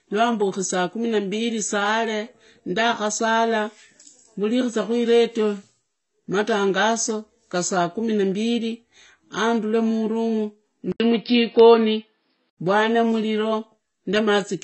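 Throughout, the speech sounds dull and warbly, with nothing above 8.1 kHz, likely from AAC compression at a bitrate that fits roughly 24 kbps.

Just after "na mbili andure murumu", at 10.92 s, an 80 ms silence falls, then the sound narrows to nothing above 5.4 kHz until 12.58 s, at the same level and with faint new background noise, as when the input is switched to a poorer device.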